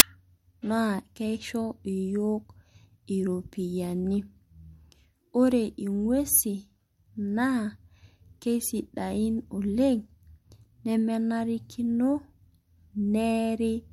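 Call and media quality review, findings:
File tags played as audio at 0.0 s. Very brief, very loud white-noise burst, hard edges, before the speech. Embedded cover-picture data decoded as samples. Its compressed bytes read as random values, hence static. Probable component: file parser or decoder.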